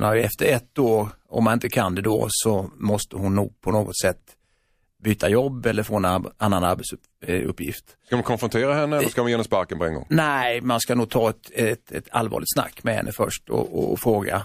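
At 5.18 to 5.20 s, just before "jobb eller få en", and again at 11.09 to 11.11 s, between "man ska nog" and "ta ett ett ett", pre-echo puts about 17 dB and then about 13 dB of hiss ahead of sharp onsets. The codec keeps a 36 ms block with no switch to short blocks, so noise meant for each loud attack spreads 20 to 22 ms into the quiet before it. Because the hiss comes before the attack rather than trailing after it, it is not reverberation or a decay tail.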